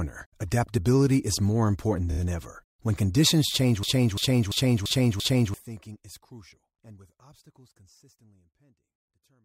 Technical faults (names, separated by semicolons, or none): repeated frames; system hang loop